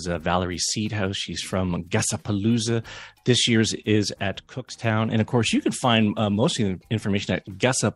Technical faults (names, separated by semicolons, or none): sudden gain jump